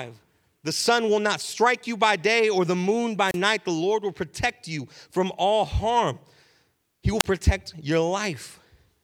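At 3.26–3.38 s and 7.19–7.24 s, wireless microphone squelch dropouts: the fading radio link brings rising hiss before a 31 ms squelch mute, unlike a clean digital gap.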